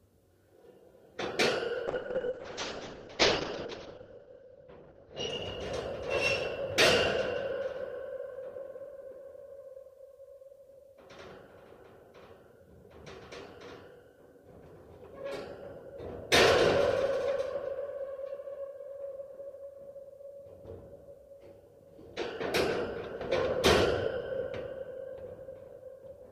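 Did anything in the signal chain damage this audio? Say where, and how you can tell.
Yes. A call bitrate drop hits the codec from 1.88 to 8.59 s. Highs vanish above 8 kHz and coarse coding roughens the sound, which fits about 6 kbps.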